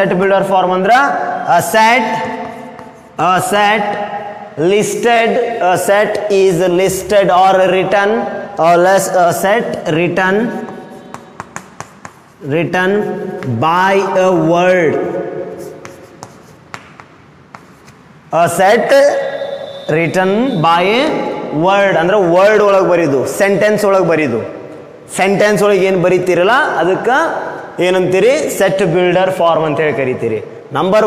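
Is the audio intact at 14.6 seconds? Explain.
Yes, the audio is intact at 14.6 seconds, with no dropout, click, distortion or other break in the sound at that moment.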